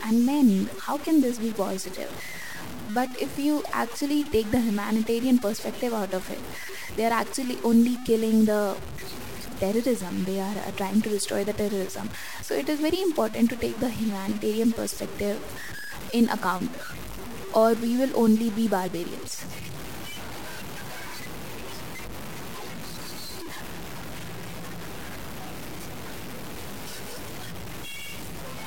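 Throughout the speech, a grainy distortion tracks the signal, sitting only about 15 dB below it, with quiet passages turning gritty and fading syllables sputtering or cutting to silence. The likely cause is low bit depth without dither, consistent with truncation to roughly 5 bits.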